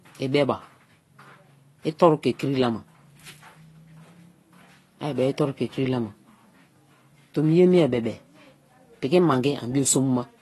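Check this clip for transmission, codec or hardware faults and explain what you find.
One codec fault runs through the whole clip. From start to finish the speech has no content above 12 kHz and sounds dull, smeared and warbling on sibilants. This is likely AAC compression at a low bitrate, consistent with roughly 32 kbps AAC-LC. The encoder cuts the top band and quantises the remaining spectrum coarsely, leaving gaps that make the damage plainly audible.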